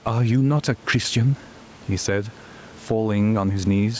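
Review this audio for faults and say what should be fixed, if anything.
Gain pumping runs through the whole speech clip. The room noise sits about 33 dB below the speech. The gain swings by around 10 dB. Loud and quiet passages end up squashed close together. The likely cause is input gain set far too high, with a fast limiter or compressor clamping down on each peak and releasing in the gaps. To prevent it, lower the microphone gain so the limiter rarely engages.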